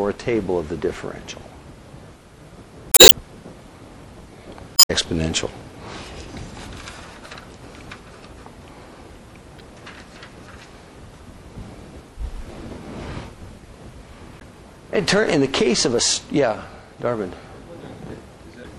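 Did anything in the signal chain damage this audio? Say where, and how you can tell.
Yes. The codec stage has left its mark across the whole clip. The upper detail sounds watery and swirly, with weak components flickering in and out. Attacks are smeared. This is plainly audible damage. It is most likely MP3 compression at a low bitrate, with a 64 kbps encode fitting the sound. Too few bits leave the encoder dropping high frequencies and quiet spectral lines frame by frame.

Storage or transmission then corrupted the compressed stream in five places. These are at 2.89 to 3.13 s, 4.73 to 4.91 s, 9.57 to 9.61 s, 14.37 to 14.42 s and 18.61 to 18.66 s. Each is heard as a brief chirp, squawk, click or short hole. This is damaged data in a compressed stream. The decoder hits bad bytes, misreads the frames, loses sync and recovers at the next good header.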